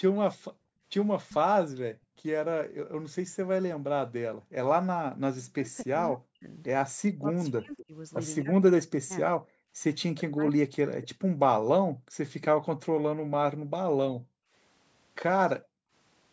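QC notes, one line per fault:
0.09–5.23 s, 11.14–14.53 s, 15.57–15.92 s: background gated by the echo canceller. While the loudspeaker played, the canceller clamped the microphone, so the room sound dips by as much as about 40 dB. The dips total roughly 2 s, 1.5 s and 0.4 s, and the background returns once the canceller releases.
5.53–10.69 s: speech suppressed in double talk. The talker's voice dips, thins or breaks up, falling as much as about 40 dB for roughly 3 s in total. This is likely because both sides spoke at once and the canceller, unable to separate the voice from the echo, turned both down.
7.78–7.85 s, 11.02–11.07 s: echo leak. A brief, faint delayed copy of the voice appears about 20 dB below the speech, 256 ms and 238 ms behind it. The likely cause is a loudspeaker-side canceller letting residual echo slip through and return.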